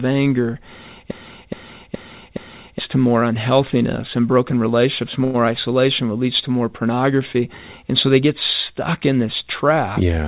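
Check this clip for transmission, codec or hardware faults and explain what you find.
Two faults stand out, on a call path that carries nothing above 4 kHz, which fits G.711 A-law.

From 1.11 to 2.79 s there is a broken-record loop. The player or stream likely stalled and kept resending its last held fragment, so a 0.42 s piece plays four times back to back. The speech that belonged there is lost before "to more unhealthiness and".

At 5.24 to 5.36 s there is a short stall from a late packet. The jitter buffer ran dry, and the receiver stretched the last sound for about 100 ms after "unhealthiness and broken relationships". Nothing is skipped, and "isolation what leads to" resumes slightly late.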